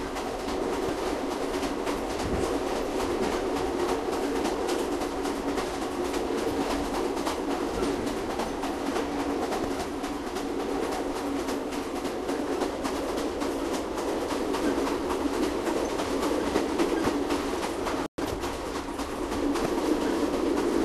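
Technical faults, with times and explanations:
0.87–0.90, 9.62–9.65, 17.03–17.07 and 19.63–19.66 s: damaged data in a compressed stream. Each is a brief chirp, squawk, click or short hole of about 30 ms where the decoder misreads corrupted frames, loses sync and jumps to the next frame header.
18.06–18.18 s: playback stall. The sound stops mid-flow for 120 ms of silence, likely because the player ran short of data or its thread was blocked. Unlike a corruption blip there is no chirp, just a clean gap before playback resumes.
18.18–18.42 s: time-compressed catch-up. Right after the stall, the player clears its backlog by cutting out small pieces and cross-fading the remainder, so the sound runs about 1.5 times faster for a quarter second. The pitch stays normal, which distinguishes it from a sped-up tape effect.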